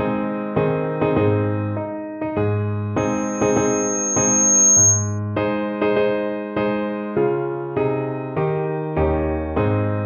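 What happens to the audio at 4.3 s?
At 4.3 s a loudspeaker feedback squeal is sounding, from 2.97 to 5.19 s. A microphone re-amplifies its own loudspeaker, so a 6.5 kHz tone swells over about one and a half seconds to roughly 10 dB above the sound.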